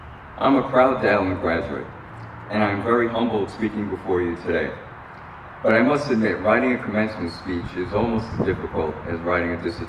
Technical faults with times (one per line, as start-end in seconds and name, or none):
none